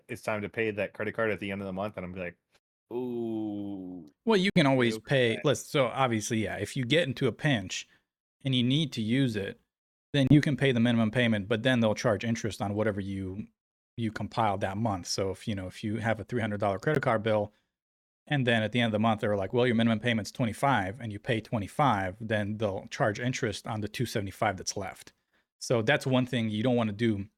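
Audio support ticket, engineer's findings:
Bluetooth dropout, three silent gaps in speech: 4.50–4.60 s, 10.27–10.40 s, 16.95–16.98 s. Audio resumes further along, as if it had kept playing. Likely packets missed their delivery deadline over the wireless link, so output stayed silent until good packets arrived.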